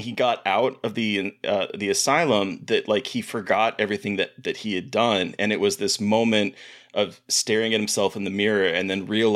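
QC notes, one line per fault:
4.50–7.23 s, crude rate conversion: the speech picks up a faint gritty fizz, roughly 35 dB below the signal, that rides on louder and brighter sounds. This fits a 48 kHz to 44.1 kHz change done by simple linear interpolation with no anti-aliasing filter. The interpolation error recurs in a cycle set by the two rates and folds into shifted, inharmonic copies of the speech, so it sounds like buzz rather than hiss.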